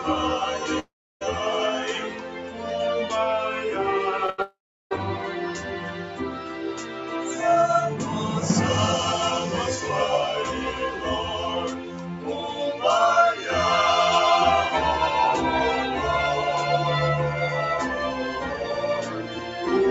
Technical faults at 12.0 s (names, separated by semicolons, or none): noise suppressor applied to music or sounds; sound cut by the noise suppressor